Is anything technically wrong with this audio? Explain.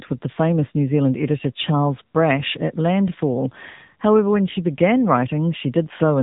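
Yes. Throughout, the speech carries AMR narrowband mobile codec damage. The codec rebuilds the voice from a vocal-tract model excited by a few pulses per subframe, so the speech sounds buzzy and synthetic, which fits a low-bitrate mode near 8 kbps. Nothing passes above 3.8 kHz.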